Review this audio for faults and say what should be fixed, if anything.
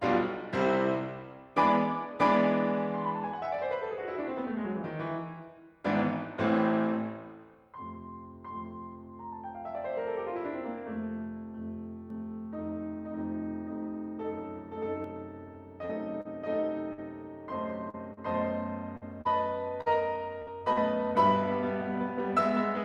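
Doubled audio track from 12.10 to 15.04 s: a second full-band copy of the music runs about half a second behind at roughly the same level, likely because a slower second capture path was mixed in. On a spectrogram every onset appears twice at a fixed offset, and the copy starts and stops abruptly with no decay. Route the source through a single capture path so it cannot be summed in twice.

Repeated packet loss (robotic sound) from 15.85 to 20.79 s: short holes of up to 49 ms recur throughout the stretch. Each one is patched by continuing the last sound, so the music turns choppy. The waveform shows brief repetitive, flattened segments, and the spectrogram shows frozen, smeared bands. Give the stream a larger jitter buffer and forward error correction so lost packets are recovered rather than concealed.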